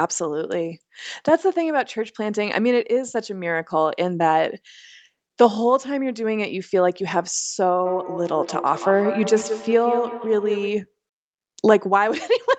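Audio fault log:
7.86–10.98 s, feedback echo between two devices: the speech comes back in repeats roughly a fifth of a second apart, thinner and more ringing each pass, peaking about 8 dB below it. A second device in the room replays it, and this microphone's echo canceller cannot remove that.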